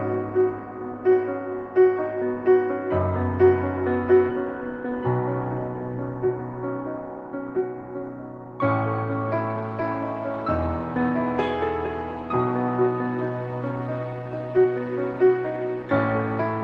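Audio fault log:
4.29–4.31 s, skip ahead: the sound jumps forward here, with no fill at all, and it looks like about a second and a half of audio never got played. Later audio was already queued, so whatever stretch was lost was either dropped in transit or thrown out when the jitter buffer overflowed. The two sides of the gap are butted straight together, which is why it comes across as an abrupt splice rather than a pause.
7.17–8.53 s and 12.52–14.96 s, jitter buffer speed-up: two stretches where the sound runs noticeably quick but keeps its pitch, first at about 108% speed, then at about 106%. The buffer was holding more audio than it wanted, so the receiver kept snipping out tiny pitch-period-sized slices to catch up. That trims roughly a tenth of a second in the first run and around 0.15 s in the second, giving a slightly rushed feel.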